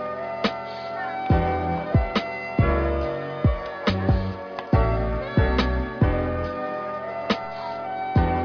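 No technical faults are audible.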